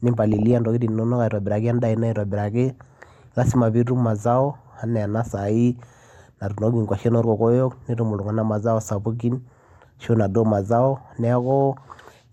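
Speech with DAB burbling at 0.33–0.53 s and 2.71–2.81 s, just before "lazima piitum mazao". Short noise blips in single sub-bands appear as weak-reception bit errors, around 0.2 and 0.15 percent, corrupt MP2 audio samples.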